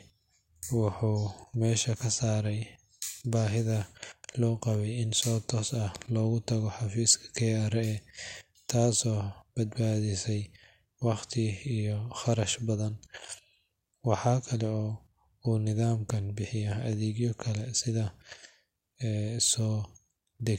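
No technical faults can be heard anywhere in this speech recording.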